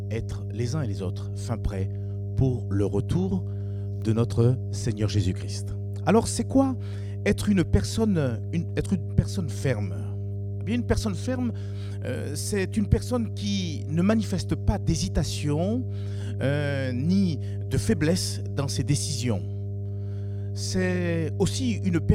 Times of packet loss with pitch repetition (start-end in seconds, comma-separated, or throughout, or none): none